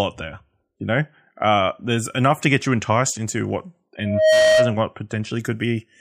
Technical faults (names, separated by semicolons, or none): loudspeaker feedback squeal